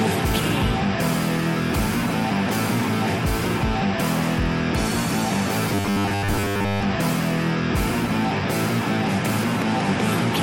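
From 5.70 to 6.83 s the sound turns into a rigid, metallic buzz at 100 Hz: robotic sound from repeated short buffers. The likely cause is input arriving too seldom, so a 10 ms chunk was looped for most of that stretch while the real audio was skipped.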